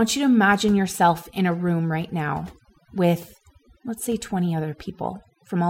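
From start to finish, the speech shows overdone noise removal: a noise reduction stage was pushed far too hard on a noisy recording. Each frequency band that dips near the tool's noise estimate gets slammed down or switched off, and the quieter components of the voice are cut along with the noise. The background collapses into an unnatural near-silence dotted with twinkling, chirpy specks.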